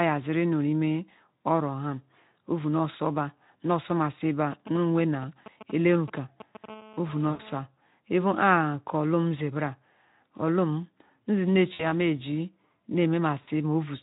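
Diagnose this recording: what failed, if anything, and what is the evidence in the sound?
From 4.52 to 6.66 s, GSM signalling bursts enter the analogue wiring: a galloping dit-dit-dit of brief 217 Hz buzzes, around 15 dB below the speech. A nearby 2G phone's radio pulses are rectified by the audio circuit. The intermittent grouping separates it from a call's continuous buzz.

From 6.68 to 7.60 s, the same phone's transmissions become a steady GSM phone buzz: a hard, raspy 217 Hz tone with dense harmonics, about 20 dB below the speech. Mains hum sits at 50 or 60 Hz and sounds smoother. This rasp matches the phone's 217-per-second burst rate, not the power line.

VoIP packet loss concealed by the speech codec occurs at the network stage, at 7.29 to 7.41 s (100 ms) and at 11.73 to 11.86 and 13.41 to 13.48 s (about 60 ms each). Instead of falling silent, the speech stretches into a buzzy tone or coloured noise that fades, then stays weak briefly. 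That fits whole 20 ms frames extrapolated by the Speex decoder, whose coding damage is light.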